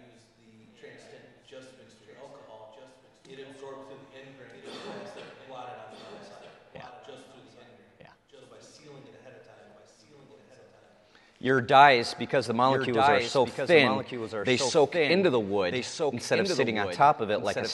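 From start to finish, a doubled audio track runs under the sound. A second full-band copy trails the original by about one and a half seconds. It sits roughly 5 dB lower. The copy carries no decay and no added room tone, so it reads as a clean repeat rather than an echo. Every event is heard twice, with the repeat overlapping whatever comes next. The likely cause is a second, slower capture path mixed in with the first.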